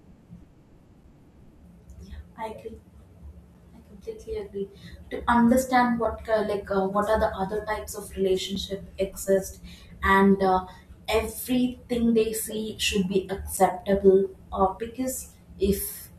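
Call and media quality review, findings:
Gap between chunks: short dropouts in the speech at 3.54, 6.05, 8.55, 11.06 and 13.57 s, each about 6.5 ms, repeating every 2.5 s. Probable cause is the packetiser or player inserting silence at each chunk boundary. No audio lost, only interrupted.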